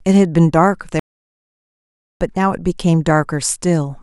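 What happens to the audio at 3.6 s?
Nothing goes wrong at 3.6 s; the speech plays through that moment intact, with no dropout, click or distortion.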